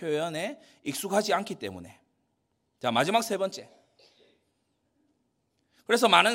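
No technical faults are audible.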